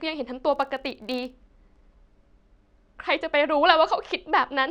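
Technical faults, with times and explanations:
0.53–1.36 s, filter restarted on every block: there's a buzz at 43.1 Hz that tracks the speech level. The filter is dropping its state and starting each block from silence, so every boundary ticks. That fits a 1024-sample buffer.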